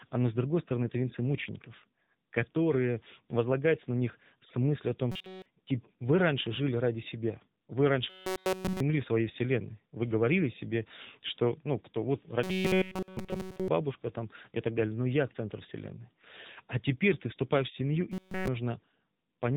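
The whole speech clip has gone through the AMR narrowband mobile codec at 7.95 kbps, so nothing survives above 4 kHz, and the low bitrate gives the voice that plainly audible buzzy, synthetic phone-line edge from the vocal-tract model squeezing everything into a few pulses.

Then there's robotic sound from repeated short buffers at 5.12–5.46 s, 8.10–8.80 s right before "в своей вселенной", 12.43–13.68 s between "что ну кто вот" and "там и так далее", and 18.12–18.48 s after "ты вступаешь в семью". Each time the audio is a rigid metallic buzz at 188 Hz with essentially nothing new coming through. That's most likely a starved playback buffer looping a slice of about 5.3 ms.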